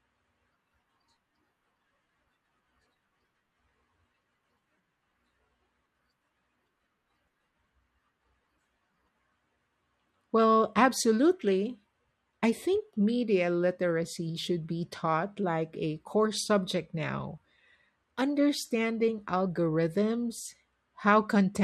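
A speech recording with no technical faults to report.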